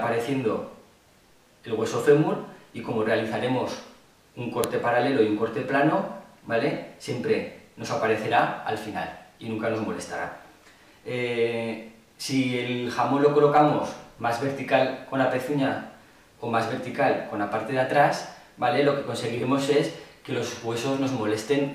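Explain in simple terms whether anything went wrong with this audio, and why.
Something did go wrong: at 4.64 s there is a single sharp snap, a file header played as audio. When pieces of a recording are joined, each file begins with a short block of setup data. If that block isn't stripped out, it plays as sound. Unlike a random crackle or a dropout, the snap lands exactly where a new piece begins.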